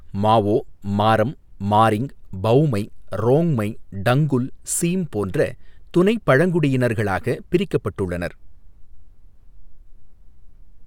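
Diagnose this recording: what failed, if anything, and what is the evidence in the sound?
Nothing failed in this speech recording, and no stage in the chain shows a fault. There is no audible evidence of a breakdown anywhere along the path from capture to playback.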